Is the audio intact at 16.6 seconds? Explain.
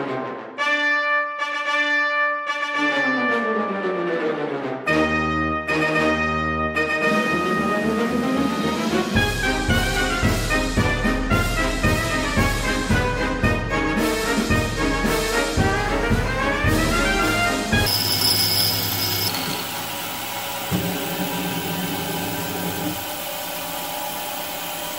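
No. A GSM phone buzz runs from 15.76 to 17.86 s. A nearby 2G phone on a call transmits 217 bursts a second, and the audio circuit rectifies them. It is heard as a steady, raspy 217 Hz buzz with many harmonics, about 16 dB below the signal.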